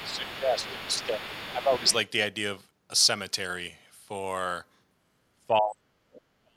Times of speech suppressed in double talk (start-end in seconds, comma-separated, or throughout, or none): 0.04-1.87, 5.48-6.02, 6.43-6.57